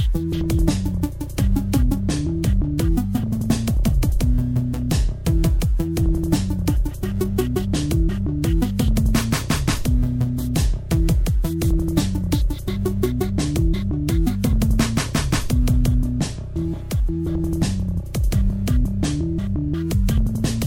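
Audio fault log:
No faults detected; the sound runs without interruption or audible defect.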